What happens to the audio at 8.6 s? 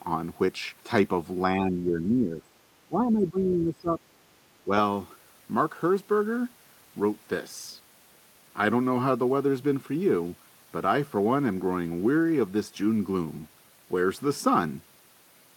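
Nothing goes wrong at 8.6 s; the audio runs through that moment intact, with no dropout, click, distortion or other fault.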